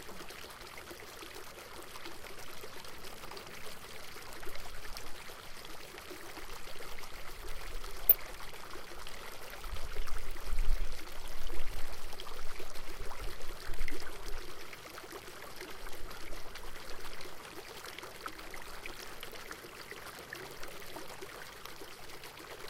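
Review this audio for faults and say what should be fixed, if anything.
DAB burbling occurs at 0.68 to 1.09 s, 8.09 to 8.14 s, 13.06 to 13.24 s and 21.12 to 21.21 s. Weak reception let a small bit error rate corrupt samples and scale factors in single sub-bands, which makes short blips and level jumps. Fix reception with a better antenna or placement before capturing.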